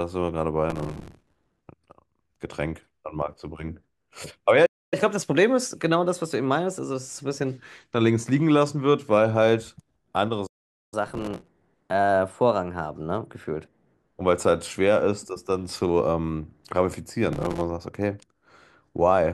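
From 0.70 to 1.61 s the speech carries a gritty crackle: processor overload crackle, where the processor repeatedly missed deadlines for tiny buffers of a few milliseconds and stale audio filled each gap.

At 4.65 s the speech cuts to silence for 263 ms, then again at 10.46 s for 455 ms. These playback stalls likely came from the player running out of data.

Each stall is followed by catch-up at higher speed, with speech rushed and raised in pitch as the backlog is played faster. From 4.94 to 7.57 s it runs at 1.1 times speed, about one and a half semitones higher, and from 10.94 to 13.94 s at 1.15 times speed, about two semitones higher.

During that second catch-up, from 11.08 to 11.48 s, the same overload crackle returns, and it appears once more from 17.33 to 17.61 s.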